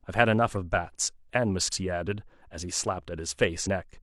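A speech recording with two short glitches, at 1.68 to 1.72 s and 3.63 to 3.68 s, each about 50 ms long. These are damaged data in a compressed stream: corrupted bytes make the decoder misread frames and lose sync until it finds the next valid frame header.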